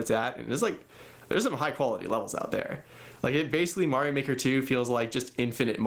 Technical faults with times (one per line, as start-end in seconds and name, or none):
0.00-5.87 gain pumping